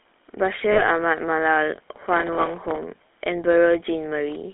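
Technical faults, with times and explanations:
Throughout, GSM full-rate codec: the speech sounds buzzy and gravelly, kept to a narrow telephone band of roughly 250 Hz to 3.5 kHz, fitting the 13 kbps GSM coder.
0.72 to 0.84 s, lost GSM frames: about 40 ms goes missing, so the codec holds the last good frame and the speech turns into a short rough, metallic ring.
1.83 to 2.83 s, processor overload crackle: for a full second the processor keeps missing deadlines on tiny buffers of around 1.5 ms, replaying scraps of old audio, which sounds like gritty tearing crackle.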